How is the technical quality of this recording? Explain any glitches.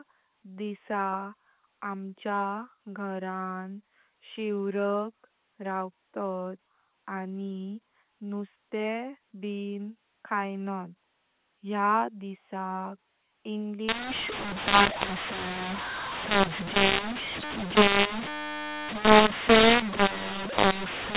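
The recording has one clear fault in its second half. It is narrowband telephone speech, cut off at 4 kHz, which fits G.711 A-law coding at 8 kHz.

From 13.89 s to the end at 21.17 s, mu-law and A-law are mixed up. The speech was coded with A-law but is decoded as mu-law. The two laws assign different levels to the same 8-bit codes. So levels get scrambled. Some samples come out too loud and others too soft. The quietest samples are pushed well above silence. The speech turns harsh and distorted, and pauses fill with noise.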